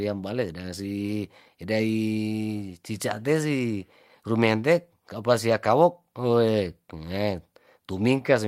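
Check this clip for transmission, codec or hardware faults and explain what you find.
Nothing wrong can be heard anywhere in this speech.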